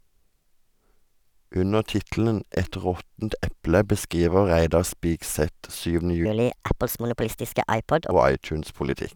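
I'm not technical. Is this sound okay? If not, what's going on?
No, there's a section at the wrong speed. From 6.25 to 8.11 s the speech runs about 1.37 times too fast, so it jumps up by roughly five semitones and sounds squeaky and rushed. That's likely a playback or editing step using the wrong clock.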